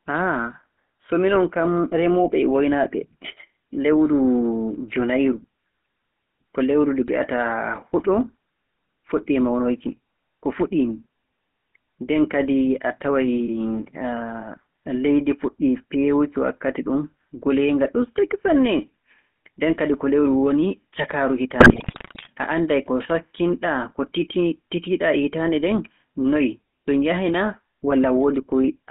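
From the start, the speech carries the sound of the GSM full-rate codec. The band runs only from about 200 Hz to 3.4 kHz. The codec rebuilds the voice from a vocal-tract model fed by regular pulses. Much of the excitation detail is thrown away. This leaves a buzzy, gravelly roughness over everything. The damage is plainly audible, which fits a 13 kbps stream.

From 21.6 to 22.27 s, GSM bit errors break in, just before "a annday". Corrupted bits reach the decoder. The filter, pitch and gain values go wrong frame by frame, over many frames. The spectrum bends and the level jumps. The voice turns into squawks, pops and gargling. The error rate points to roughly 6 percent of bits flipped.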